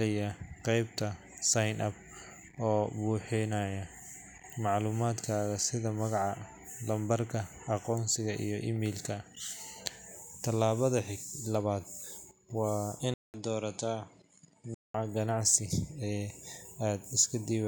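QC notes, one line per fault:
13.14–14.94 s, input switched to a poorer device: after a 200 ms silence the speech turns duller, with nothing above 10.8 kHz, drops roughly 5 dB and carries a new faint noise floor, likely a switch of microphone. The gap and changed background rule out a simple filter change.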